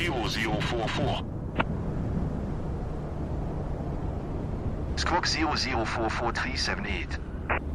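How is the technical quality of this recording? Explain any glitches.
No glitches are audible anywhere in the recording, so there is nothing to explain.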